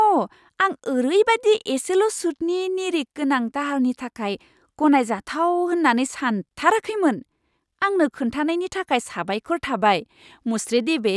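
A speech recording with nothing technically wrong to point to anywhere in it.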